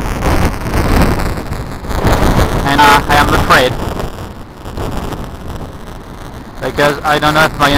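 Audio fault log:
Throughout, buffer tearing: a steady robotic buzz at 200 Hz, present only while sound plays, because the writer and reader of the ring buffer cross each period. A small slice of each period, a few percent, repeats audio about 10 ms old between two hard joins. Unlike dropouts, there are no silent gaps.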